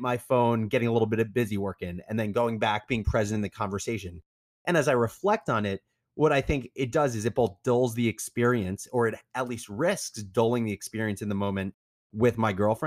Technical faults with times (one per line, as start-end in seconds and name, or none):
none